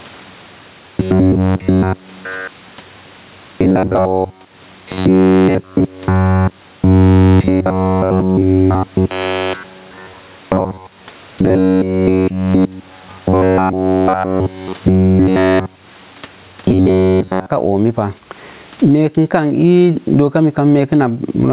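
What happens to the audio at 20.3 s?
At 20.3 s you're hearing the same gain pumping that runs through the whole clip, with the gain swinging something like 20 dB. The likely cause is mic gain set way too high, with a fast limiter or compressor clamping down on every peak and squashing the dynamics. The background itself sits about 44 dB below the speech, and the narrowband call path stops everything above 4 kHz.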